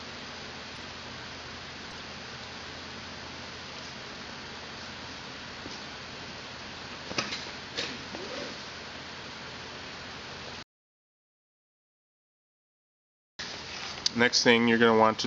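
Three short bursts of corrupt frame decoded damage break into the audio at 0.75 to 0.78 s, 1.90 to 1.93 s and 3.83 to 3.91 s. Each lasts a couple of codec frames, about three in the last case. Flipped bits made the decoder rebuild those frames with wrong gains or spectral codes, so energy lands at frequencies that don't belong. The result is a chirp or noisy blip rather than a plain click, and it differs from a concealed lost packet, which would smear or repeat nearby sound instead of adding foreign tones. From 10.63 to 13.39 s there is an audio dropout to silence lasting about 2.76 s. The signal stops abruptly and returns just as abruptly, and the gap is silent with no room tone or hiss. That separates it from a noise gate or fade, which would taper or leave a floor. The likely cause is the input being lost while the recorder kept writing silence, so whatever sounded during those seconds is gone.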